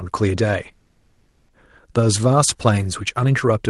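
From 0.71 to 1.50 s, a call audio freeze stretches the last sound into a fading buzz, then about 30 ms of silence, before speech resumes where it stopped, likely from delayed packets draining the jitter buffer. A spectrogram shows smeared, decaying horizontal bands ending in a brief blank strip.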